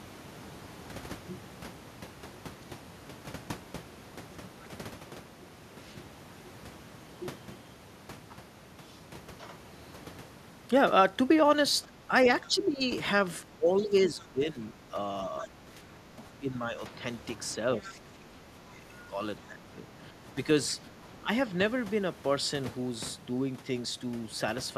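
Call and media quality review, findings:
Speech suppressed in double talk at 11.85–12.81 s, 13.52–16.92 s, 17.8–20.23 s and 21.01–21.3 s. Talker's speech dips by up to about 15 dB. Likely the echo canceller's suppressor is ducking near-end speech while the far end talks. On the waveform the envelope is notched.

Other side's voice leaking through at 13.77–14.26 s and 15.39–15.47 s, about 25 dB below the talker. Faint second voice. Likely residual loudspeaker echo that the canceller did not fully subtract. On the spectrogram it shows as weak harmonic traces under the main speech, and on the waveform it is barely visible.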